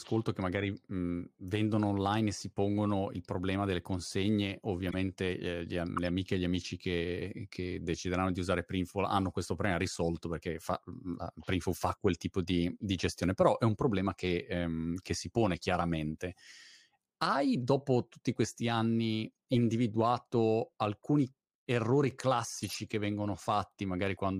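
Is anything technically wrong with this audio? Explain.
Yes. Five brief glitches, each a chirp, squeak, blip, noise burst or short hole, break into the speech at 4.89–4.94 s, 5.97–6.08 s, 19.52–19.56 s, 21.03 s and 22.63–22.72 s. The one at 21.03 s sits far lower than the others, and the 5.97 s event is the strongest. Each is a corrupt frame decoded: flipped bits in a few compressed frames led the decoder to misread gains or codes and put energy at the wrong frequencies for roughly those frames' length.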